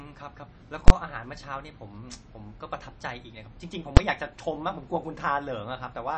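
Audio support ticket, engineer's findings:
Speech clip, watery, swirly texture, plainly audible throughout; nothing above 8.3 kHz; consonant attacks smeared. Likely cause: MP3 compression, bit-starved, consistent with roughly 32 kbps. Encoder zeroing weak frequency lines frame to frame, plus a fixed treble cutoff at the encoder.

Invalid numbers at full scale, two events. 0.88 to 0.90 s: block held at one extreme value for about 21 ms; loud pop at each edge, silence between, fits a 1024-sample processing block. 3.97 s: 5 ms block, heard as a single bang, fits a 256-sample block. Mechanism: a DSP stage produced infinite or invalid values, clamped to the largest positive or negative value for the whole block.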